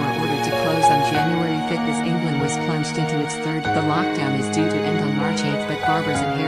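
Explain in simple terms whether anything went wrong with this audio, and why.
Something near the recording chain, most likely electrical interference from nearby equipment or a faulty connection or power supply, kept injecting short pulses right at the start. The result is a train of clicks from 0.05 to 1.14 seconds: about fifteen similar ticks, roughly 11 per second but unevenly spaced, that pop out clearly above the sound and stop after the first second or so.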